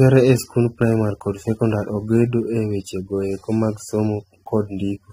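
From start to finish the speech carries plainly audible AAC compression damage, likely from an AAC-LC encode at a low bitrate, around 27 kbps. Nothing reaches above about 16.3 kHz, so the very top of the spectrum is gone. Below that, the encoder has quantised the spectrum coarsely against its hearing model, leaving smeared detail. The result sounds dull and blurred, with a warbling, fizzy texture on sustained sounds and sibilants.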